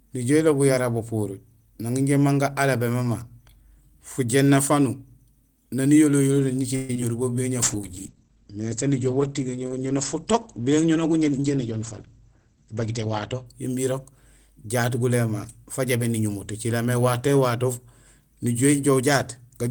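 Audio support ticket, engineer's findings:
Call audio freeze, 6.75–6.90 s, right after "niyolo yolo": sound stalls and the last bit is stretched into a fading buzz or hiss for about 0.14 s, then resumes where it left off. Likely cause: late packets draining the jitter buffer. Unlike packet loss, nothing is dropped; the gap is inserted, adding about 136 ms of delay.

Short concealed packet loss, 6.94 s and 7.01 s: two brief smears or wobbles, each roughly 10 ms of audio never decoded and patched by extrapolating the preceding sound before crossfading back. Distinct from the freeze: much shorter, no added delay, and the original content there is actually gone, so a quick consonant may disappear.

Call bitrate drop, 7.63–13.52 s, ending just before "imbi irok": encoder pushed from 32 to 14 kbps after the bandwidth estimate fell, held at the floor for about 5.8 s. Audio turns coarse and watery, and the top end is cut from 20 kHz to 8 kHz, giving a muffled tone. 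Unlike packet loss, this is a steady quality change over seconds, not short glitches.

Jitter buffer speed-up, 11.32–13.07 s, also ending before "imbi irok": buffer over target, so the receiver trims pitch-period-sized pieces repeatedly, about 150 ms in total. Speech runs about 8% fast with pitch unchanged, sounding hurried. This overlaps the bitrate drop, but it alters pace rather than tone or bandwidth.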